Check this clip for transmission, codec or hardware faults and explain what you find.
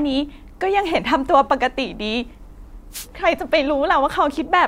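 One fault stands out in this speech clip: a wireless microphone noise hit from 2.91 to 3.07 s. The analogue FM radio link fades briefly as reflected signals cancel, so receiver noise rises for about 0.16 s, heard as a short swish of static.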